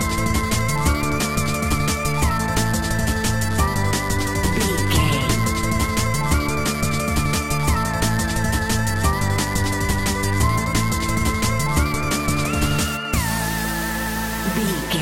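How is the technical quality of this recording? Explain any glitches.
There is one glitch in the recording, a single isolated click.

A bit error spike occurs at 1.03 s. One sample was corrupted by a flipped bit, so its value leapt by a power of two to about -13 dBFS and immediately returned. It sounds like a single sharp, broadband tick that has nothing to do with the surrounding sound.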